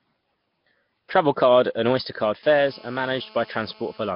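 Throughout, the speech sounds rough, hissy and smeared underwater, with nothing above 5.3 kHz. This is likely Nellymoser compression, consistent with about 22 kbps, filling starved bands with noise.

From 2.43 to 4.11 s comes GSM phone buzz. A handset in a call sends bursts that the audio circuit rectifies into a steady, raspy 217 Hz buzz about 24 dB below the speech.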